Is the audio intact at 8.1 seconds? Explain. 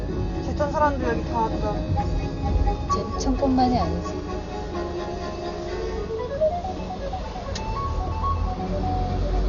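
No. At 8.1 seconds, as throughout the clip, the sound was likely squeezed through Dolby Digital compression at a very low bitrate, around 48 kbps. The encoder cut the band and left many frequency lines without real detail, so nothing remains above 6.9 kHz, and heavy dither-filled gaps make it dull with rough, fluttering noise around tones.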